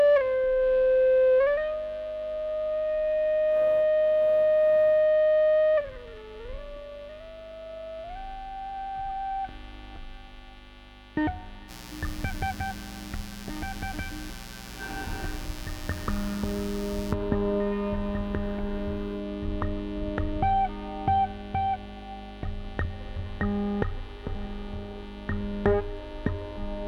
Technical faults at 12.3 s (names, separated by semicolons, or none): mains buzz